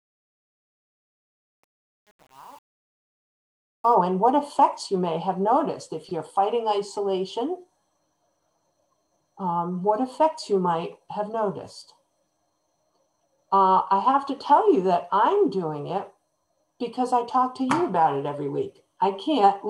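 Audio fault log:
0.00–3.94 s, truncation distortion on the fade-in: gritty distortion up to about 3.68 s as the quiet ramp collapses into coarse undithered steps, which fits an 8-bit gain stage.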